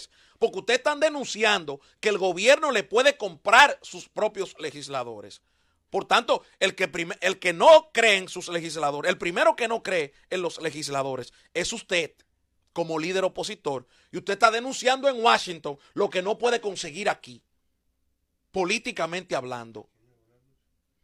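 An adaptive stream at a lower bitrate: from 15.35 s to the end of the clip at 21.04 s, the audio drops abruptly to a lower-quality rendition with no gap or dropout at the switch. After it the stream moves from roughly 96 kbit/s AAC-LC to HE-AAC near 32 kbit/s, with coding artefacts raised.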